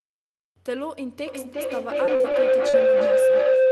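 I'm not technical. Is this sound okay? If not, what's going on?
No. From 1.27 s to the end there is a feedback howl. Sound loops between microphone and loudspeaker, growing each time into a steady tone near 500 Hz that pulses about every 0.4 s. From 2.05 to 2.75 s there is repeated packet loss, giving a robotic sound. Bits of the audio went missing over the connection, and the gaps were patched by stretching what came just before.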